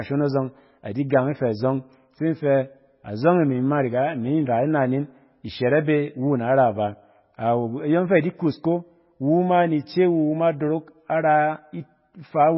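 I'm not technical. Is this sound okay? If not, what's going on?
No. From start to finish the speech sounds dull and muffled, with a watery, swirly quality, and s sounds come out smeared or metallic. Nothing above roughly 5.6 kHz survives, so the crisp top end of the voice is missing. This is likely heavy MP3 compression: squeezed into very little data, the file loses its treble and the weakest parts of the sound, which flicker in and out and cause the swirl.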